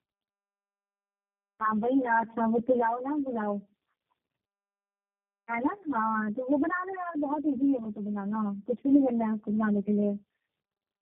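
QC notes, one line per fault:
Throughout: channel delay (comb filtering). One channel lags by around 10 ms before mono summing, cancelling evenly spaced notches from about 50 Hz upward, so speech sounds hollow and phasey.
Throughout: tandem speech coding. Repeated decode and re-encode stages, consistent with roughly four codecs ending in G.729A, compound roughness and warble; nothing survives above 3.4 kHz, so speech sounds muffled.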